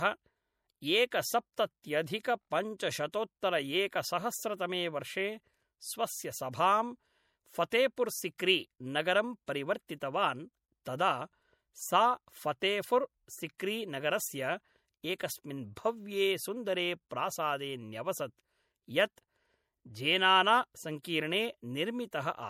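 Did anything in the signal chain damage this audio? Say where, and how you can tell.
Yes, at the codec stage, and likely MP3 compression: throughout the speech there is a plainly audible watery swirl where weak frequency lines drop in and out between frames, and nothing sounds above 18.1 kHz, which fits a bitrate around 64 kbps. A clean lowpass filter would leave no swirl.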